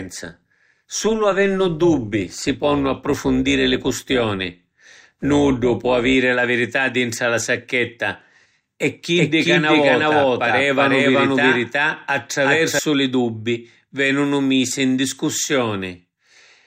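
From 0.0 to 6.15 s the speech carries overlap-add ripple: frames were windowed and rejoined with overlaps that don't sum evenly, so the level swings by about 6 dB around 200 times a second. Unlike mains hum, it is a metallic buzz that only exists where speech does.

From 9.17 to 12.79 s a doubled audio track appears, likely from a second, slower capture path: a full-band copy at roughly equal level trails by around 400 ms. Unlike a room echo, it has no decay or colouring and switches on and off abruptly.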